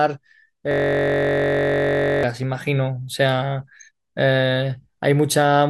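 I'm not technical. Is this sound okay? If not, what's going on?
No. From 0.71 to 2.23 s there is a system hang loop: the computer froze while the sound hardware kept replaying its last 21 ms piece of audio. That tiny piece repeating about 47 times a second turns the speech into a steady buzz.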